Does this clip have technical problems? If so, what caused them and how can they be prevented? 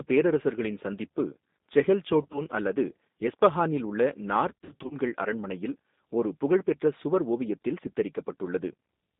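Yes. The whole clip has passed through the G.729 codec at 8 kbit/s, confined to about 200 Hz to 3.7 kHz. Unlike plain band-limiting, which only muffles, this gives the speech a rough, synthetic buzz from the pulse-based excitation. To prevent it, use a wideband codec such as G.722 or Opus.

VoIP packet loss concealed by the speech codec occurs twice. The first is at 2.22 to 2.43 s, between "பேரரசர்களின் சந்திப்பு செஹெல்" and "அல்லது எஸ்பஹானில் உள்ள": 60 ms lost, scattered over 120 ms, in runs of up to 30 ms. The second is at 4.50 to 4.96 s, before "அரண்மனையில் ஒரு புகழ்பெற்ற சுவர்": 190 ms lost over 400 ms, in runs of up to 50 ms. Rather than silent gaps or clicks, the decoder stretches the last sound into a fading buzzy tone or coloured noise that stays distorted after packets resume. To prevent it, use a stable network path with QoS, a jitter buffer and forward error correction.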